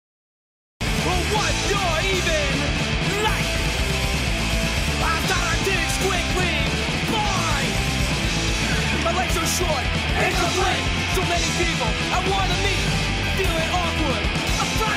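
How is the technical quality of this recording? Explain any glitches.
There's one glitch, a cut-off start. The first 0.81 s is silence, then the audio jumps in mid-sound at 0.81 s with no attack or fade-in. Capture began late, so whatever was already sounding gets chopped off abruptly.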